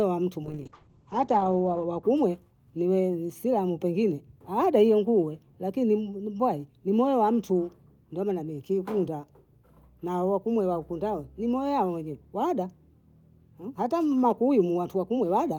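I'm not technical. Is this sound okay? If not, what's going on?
No. From 0.44 to 2.09 s, right after "wa mtu", a call bitrate drop makes the speech coarse and muffled. The connection briefly sent far less detail, then recovered.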